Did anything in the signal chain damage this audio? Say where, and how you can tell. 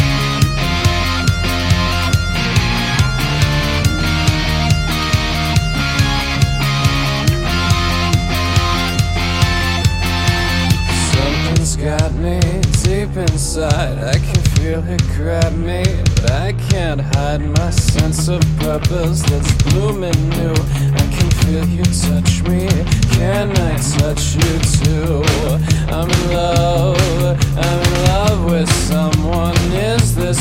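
No, nothing stood out on listening that would point to damage at any stage of the chain.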